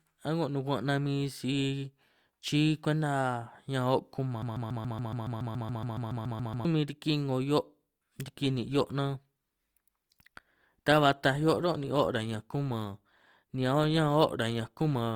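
From 4.42 to 6.65 s there is a broken-record loop: the player, encoder or stream most likely stalled and kept resending the last fragment it held. The result is a 140.73 ms slice of speech repeating exactly, back to back, 16 times, giving a rapid mechanical stutter. Whatever should have been heard during those two seconds or so is gone, and the speech resumes further on.

At 8.43 s the adaptive stream steps down to a lower bitrate and stays there to the end. The sudden change in quality points to a switch from about 64 kbit/s Opus to about 24 kbit/s Opus as the connection slowed. The switch is instant, with no gap. From then on the speech has stronger codec artefacts, although the band still reaches 20.2 kHz.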